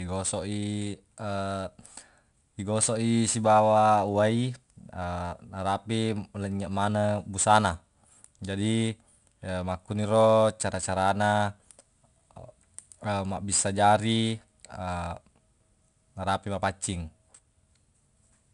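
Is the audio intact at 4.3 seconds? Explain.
No. 4-bit ADPCM compression runs through the whole clip, including 4.3 s. Each sample is coded as a coarse 4-bit step from a prediction, adding gritty hiss that follows the speech level. Nothing above 10.6 kHz survives, which points to a low sample rate.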